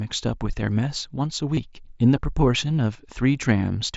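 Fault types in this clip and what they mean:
Concealed Bluetooth headset packet loss: at 1.55–1.57 s about 22 ms of audio goes missing and gets patched with repeated recent waveform, leaving a brief buzzy blip and small warble.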